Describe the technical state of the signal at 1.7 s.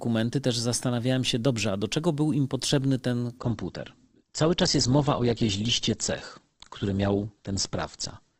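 At 1.7 s the speech signal is intact, with no technical fault audible at that moment.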